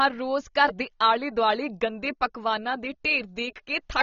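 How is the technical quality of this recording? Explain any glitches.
The speech has plainly audible codec damage from start to finish. Throughout, the sound likely went through AAC compression at a low bitrate, consistent with roughly 24 kbps AAC-LC. The encoder discards everything above about 6.9 kHz and coarsely quantises what remains, leaving a dull, smeared tone with fizzy, warbling sibilants. A simple low-pass filter would cut the top just as cleanly but would not add that swirling texture.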